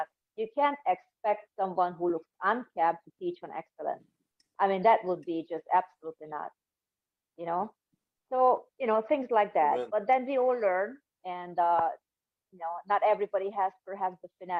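No technical faults can be heard anywhere in the audio, and the signal stays continuous and steady throughout.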